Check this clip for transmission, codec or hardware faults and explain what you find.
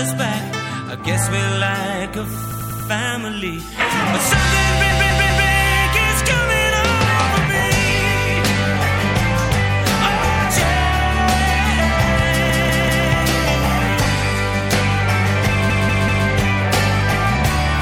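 Repeated frames occur four times: a run of compressed frames was resent, so the decoder replays it. A 96 ms block plays four extra times at 2.51–2.90 s, and 192 ms blocks repeat three extra times at 4.91–5.49, 12.50–13.07 and 15.70–16.27 s. Each stutters.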